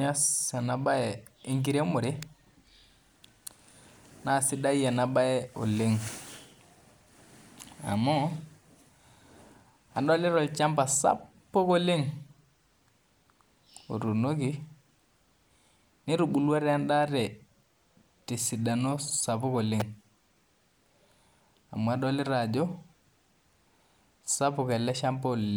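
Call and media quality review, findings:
Electrical switching spike: two sharp snaps over the speech, at 2.23 s and 19.80 s. Likely a nearby switch, motor or static discharge arcing, with the audio line picking up each short burst on top of the signal.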